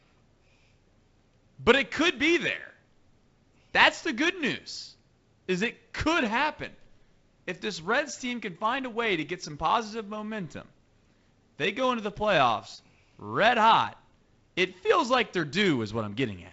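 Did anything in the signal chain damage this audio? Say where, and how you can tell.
No, nothing in the chain has damaged this speech; it just sounds like a normal G.722 wideband telephone path, with content stopping at about 7.7 kHz, a faint hiss in the top band, and a slightly grainier lower band that fits the codec running at 48 kbit/s.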